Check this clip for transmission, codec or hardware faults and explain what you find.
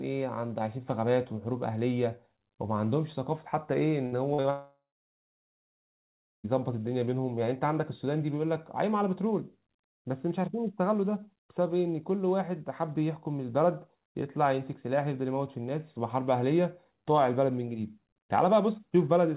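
Four connected faults cluster around four to six seconds into this speech, all stemming from packets failing to reach the receiver in time.

Burst of packet loss, 4.06 to 4.14 s: about 60 ms of consecutive packets went missing, so the receiver extended and faded the last sound into a brief buzz or hiss.

Short concealed packet loss, at 4.34 to 4.40 s and 4.42 to 4.46 s: gaps of 40 and 20 ms were patched by continuing the preceding sound, heard as quick smears or wobbles.

Long network dropout, 4.50 to 6.46 s: the sound stretches into a fading tail, then about 1.6 s of silence. This is likely a network dropout, with nearly two seconds lost before audio resumes further on. Throughout, the band stops at 4 kHz, which fits the G.711 call codec in use.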